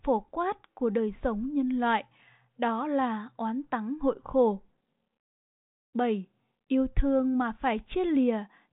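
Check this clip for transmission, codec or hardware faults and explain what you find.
Nothing stood out on listening to the speech, which comes through the 40 kbit/s G.726 telephone path with its top end stopping around 3.8 kHz.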